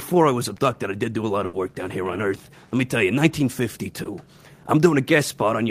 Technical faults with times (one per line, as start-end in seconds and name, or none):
1.45-1.55 burst of packet loss
4.03-4.07 short concealed packet loss